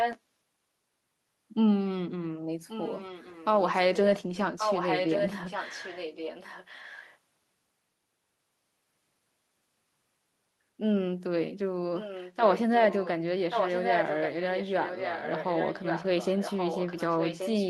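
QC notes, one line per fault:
0.00–0.19 s, echo leak: a delayed copy of the speech, roughly as loud as the speech itself, arrives about 1.13 s late, likely from a far-end echo canceller letting loudspeaker pickup through.
2.67–3.45 s, echo leak: a faint returned copy trails the speech by about 1.13 s, likely residual echo that the far end's canceller failed to remove.
4.58–7.18 s, echo leak: a sustained echo, only a little quieter than the speech, repeats it about 1.13 s later, likely the far-end canceller passing back its microphone's loudspeaker pickup.
11.99–13.09 s, echo leak: a faint copy follows the speech at about 1.13 s delay, likely leftover loudspeaker sound that the far end's echo canceller let through.
13.50–17.69 s, echo leak: a fairly strong delayed copy runs to the end, about 1.13 s behind the speech, likely an incompletely cancelled loudspeaker return from the far end.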